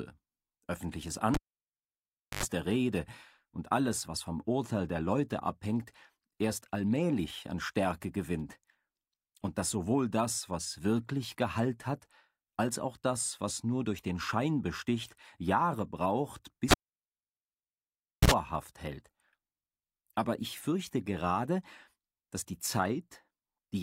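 Two pops bracket a dropout at 1.34 to 2.43 s: about 1.04 s of near silence, then roughly 85 ms of 50 Hz buzz before the sound returns. It recurs at 16.71 to 18.32 s, with 1.55 s of near silence and 65 ms of 60 Hz buzz. This is a cable pulled and plugged in while live; the buzz is hum picked up as the plug's tip touched first.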